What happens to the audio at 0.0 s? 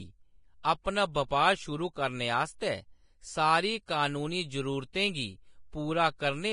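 From the very start the speech sounds hissy and grainy, with roughened tones, smeared consonant attacks and nothing above about 10.6 kHz, and this lasts the whole clip. The likely cause is heavy Vorbis compression, consistent with a rate near 30 kbps, quantising the treble into noise.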